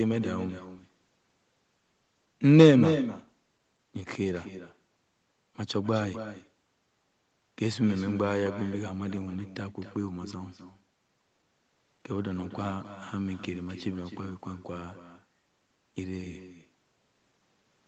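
A speech clip with echo with no canceller throughout: the far end's loudspeaker feeds its microphone unchecked, so every phrase returns about a third of a second later, about 10 dB quieter and thin.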